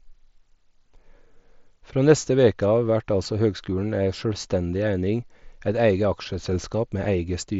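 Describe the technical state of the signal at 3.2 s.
A single voice packet was dropped on the Bluetooth link at 3.24 s. Concealed Bluetooth headset packet loss refilled the 7.5 ms gap with repeated recent waveform, leaving it nearly inaudible.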